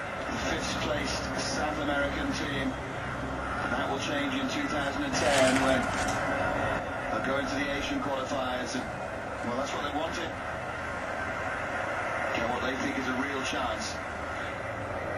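The audio carries a sudden gain jump: at 5.13 s the whole level steps up by about 5 dB with no ramp, holds for roughly 1.7 s, and drops back at 6.79 s. The background noise rises and falls in lockstep with the foreground, which separates this from a louder source or an automatic gain control, whose changes would track the content and glide rather than switch instantly. The likely cause is a digital gain setting applied from one sample to the next.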